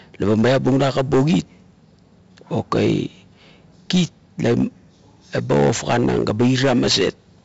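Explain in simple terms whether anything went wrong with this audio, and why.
4-bit ADPCM compression runs throughout: each sample is saved as a rough small step, adding gritty hiss to loud speech and removing everything above 7.7 kHz.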